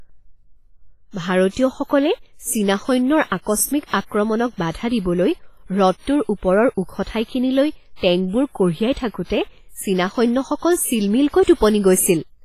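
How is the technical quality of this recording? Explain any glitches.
The technical quality is poor: heavy coding damage runs through the whole speech recording. From start to finish the sound rings and smears, with a washy hiss that swells and fades along with the speech, and nothing is present above 15.3 kHz. This is likely WMA compression: its transform blocks spread quantisation noise over tens of milliseconds, and weak spectral detail is zeroed out, which fits a low bitrate of around 24 kbps.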